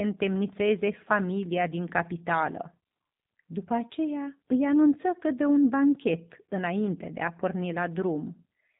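Throughout the speech, G.729 codec damage is plainly audible: each 10 ms frame is rebuilt from a vocal tract filter, pitch predictor and sparse pulses, giving a rough, synthetic buzz. Nothing passes above 3.8 kHz, so a spectrogram shows a hard ceiling there, which fits an 8 kbit/s G.729A stream.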